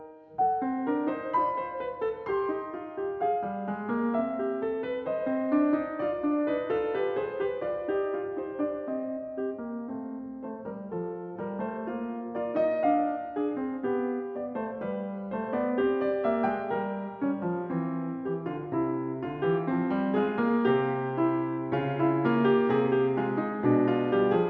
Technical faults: none

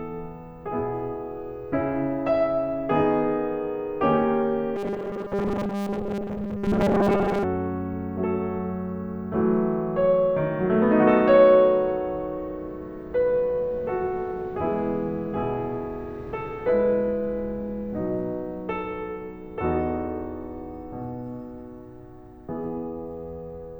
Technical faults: robotic sound from repeated short buffers

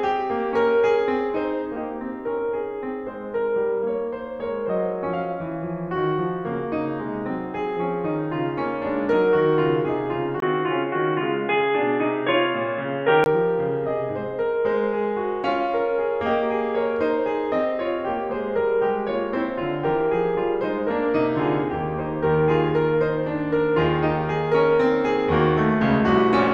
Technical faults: input switched to a poorer device

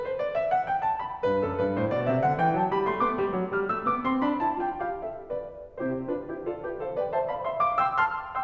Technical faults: none

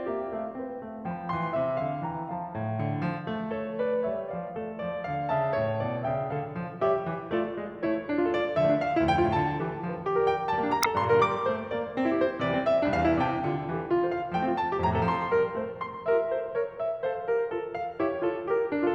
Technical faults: damaged data in a compressed stream

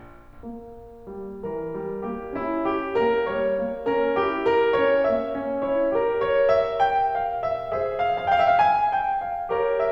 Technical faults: none

